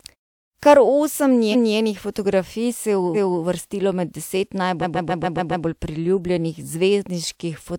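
Repeated frames stutter this speech clip at 1.51–1.74 s and 3.14–3.42 s, where 0.23 s and 0.28 s blocks each replay once, and at 4.81–5.64 s, where a 0.14 s block plays seven times. Compressed frames were duplicated before decoding, each replay adding its length to the audio, while the muted pauses drop cleanly to silence between phrases.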